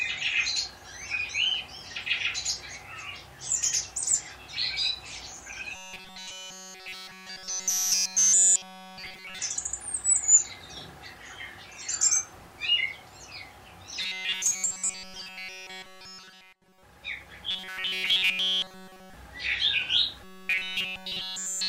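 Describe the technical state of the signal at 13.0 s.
At 13.0 s the signal is intact, with no audible fault at that moment.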